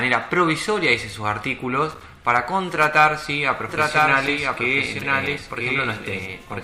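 From 3.69 s to the end, the audio has a doubled audio track: a second full-band copy trails about one second behind, roughly 5 dB quieter. It is likely a slower duplicate capture path or misaligned edit. Unlike an echo, it begins abruptly, with no decay or room colour.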